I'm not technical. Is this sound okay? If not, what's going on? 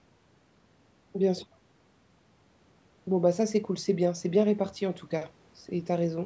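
Yes, this sound is okay; nothing is going on beyond the normal trimming of the deepest bass by a call microphone.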